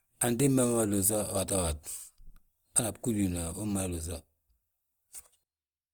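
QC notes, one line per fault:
Throughout: Opus compression, plainly audible across the whole speech clip. The sound is rough and grainy rather than swirly, with a noisy texture on sustained tones. This is likely Opus running in its music (CELT) mode, which keeps each band's energy but fills starved bands with noise or folded copies of lower bands. The bandwidth stays full, extending to about 20.2 kHz, and the damage level fits a low rate around 24 kbps.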